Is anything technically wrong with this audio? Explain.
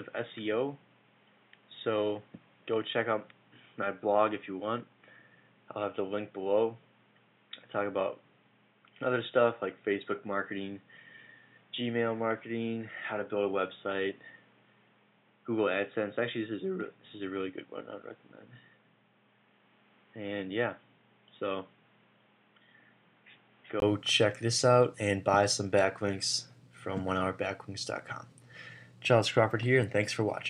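Yes. From 0.0 to 23.82 s the audio is dull and boxy, with nothing above 3.8 kHz, a few decibels quieter, and carrying its own faint background noise well below the signal. At 23.82 s a gap of about 20 ms is followed by full, brighter sound. This is likely an input switched to a poorer device, such as a headset call profile. A simple filter or codec change would not also shift level, tone and noise floor together at one break.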